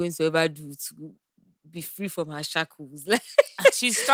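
No technical faults can be heard anywhere in the speech recording, with the signal staying steady and intact throughout.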